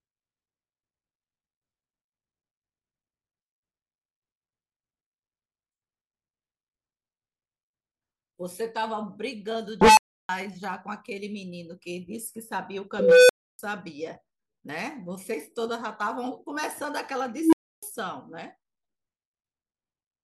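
At 9.81, 12.99 and 17.34 s an unstable filter runs away: a tone near 1 kHz, then 500 Hz, then 300 Hz swells over 0.16, 0.30 and 0.19 s, clips, and drops into about 0.3 s of silence. Unlike feedback howl, it cuts out abruptly instead of sustaining.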